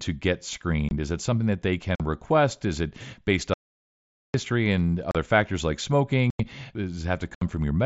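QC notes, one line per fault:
0.89–0.91, 1.95–2.00 (after "it something that they"), 5.11–5.15 (before "factors like"), 6.30–6.40, 7.35–7.42: unconcealed Bluetooth headset packet loss. Holes of 22.5, 45, 37.5, 90 and 67.5 ms with abrupt edges chop the speech. Each length is a multiple of 7.5 ms, which fits lost headset frames replaced by nothing. On a spectrogram these show as narrow, sharp-sided vertical gaps. On the waveform they are flat notches. The wideband mSBC link passes speech up to 8 kHz around them.
3.54–4.34 (after "it based"): audio dropout to silence. The speech cuts out mid-flow for about 0.81 s, and the gap holds no room tone at all. The likely cause is an input or link that was lost while recording carried on writing silence. The waveform shows a flat line. The spectrogram shows a blank block across all frequencies.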